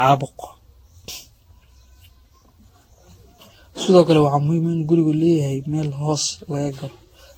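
A speech clip with generation loss from start to finish. The sound is swirly and smeared. It has a hollow, scooped quality, and consonant attacks are blurred. That is worse than a single encode at this quality would give, which points to a codec around 60 kbit/s, fitting Vorbis. The likely cause is repeated lossy re-encoding, about ten passes. Each pass requantised on a shifted frame grid, so noise and spectral holes built up.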